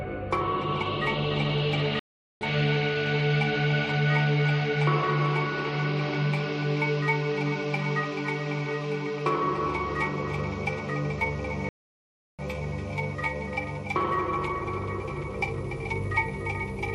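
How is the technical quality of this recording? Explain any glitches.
The recording has two stream reconnects, at 1.99 s and 11.69 s. Each time, the connection dropped, the player restarted its decoder mid-stream, and the audio went silent for 416 ms, then 697 ms. The sound resumes slightly later, skipping roughly 300 ms, then 400 ms.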